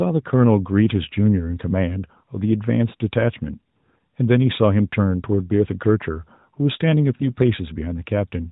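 Lost AMR speech frames occur at 7.16 to 7.25 s, a gap of about 40 ms that fits two consecutive 20 ms frames discarded after radio errors broke their checksums. The narrowband decoder filled the hole by repeating the last good pitch and vocal-tract settings at falling gain, so the sound smears briefly and dips in level before the next intact frame restores it, weak or rough for a moment. The rest of the clip stays within the codec's 4 kHz limit.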